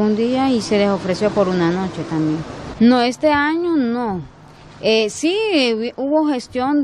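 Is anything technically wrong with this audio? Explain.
No, nothing technically wrong stands out here; it all sounds just as it should.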